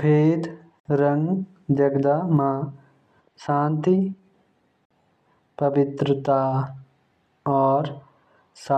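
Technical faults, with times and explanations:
0.80–0.85 s and 4.85–4.91 s, gap at a join of encoded pieces: separately encoded chunks about 4 s long were butted together with encoder delay and end padding left in, opening 55 and 53 ms silences with smeared edges. Unlike a dropout, the speech resumes exactly where it stopped, with nothing skipped.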